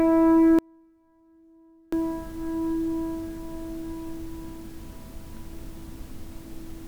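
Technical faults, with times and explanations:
0.59 to 1.93 s, audio dropout to a faint residue: the sound cuts out abruptly for about 1.34 s, leaving only a faint trace roughly 35 dB below its normal level before returning mid-flow. This is likely a break in the wanted signal while the downstream path stayed live.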